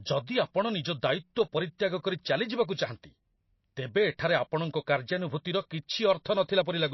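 From start to finish the speech sounds watery and swirly, with nothing above 5.8 kHz. That's likely MP3 compression, squeezed to a very low bitrate.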